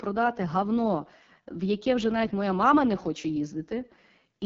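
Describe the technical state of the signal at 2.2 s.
At 2.2 s you're hearing the AMR wideband (HD Voice) codec, and it's there for the whole clip, not just that moment. The speech is rebuilt from a pulse-excited vocal tract model, with the top band filled in by shaped noise, and nothing gets past about 7.5 kHz. The damage is heavy: the voice comes out rough and raspy, the kind of grain that points to one of AMR-WB's lowest modes, around 6.6 kbit/s.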